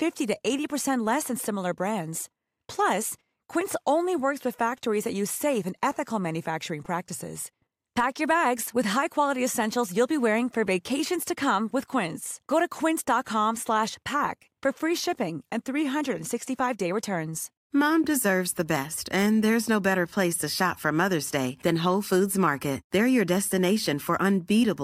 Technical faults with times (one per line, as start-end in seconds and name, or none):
none